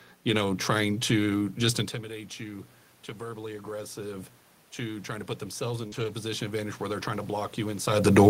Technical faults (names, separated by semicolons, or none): automatic gain rising; short concealed packet loss; lost packet rebuilt from error correction